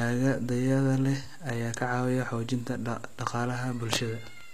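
From start to finish, the speech carries plainly audible codec damage. The top of the spectrum sounds synthetic. It is bright, but grainy and metallic, and the s sounds come out gritty and lispy. This is likely HE-AAC compression at a low bitrate, one that fits about 24 kbps. Only the lower band is truly coded. The treble is rebuilt by copying lower bands upward, so its harmonics no longer match the real voice.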